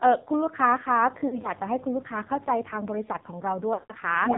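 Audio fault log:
throughout: AMR narrowband mobile codec. A very low bitrate, consistent with roughly 6 kbps, starves the vocal-tract model, leaving buzzy, synthetic speech with nothing above 4 kHz.
1.00–2.97 s: mains buzz. Switching spikes from a 50 Hz supply leak into the signal, adding a steady, raspy buzz rich in harmonics, well below the speech level.
1.28–1.50 s: lost AMR speech frames. Scattered frames fail, with the longest run 40 ms and about 60 ms missing in total. The decoder repeats old settings, causing short dips and warbles.
3.74–3.92 s: lost AMR speech frames. A continuous 160 ms run is lost. The decoder stretches the last good sound with falling gain until it fades to silence, then speech returns rough.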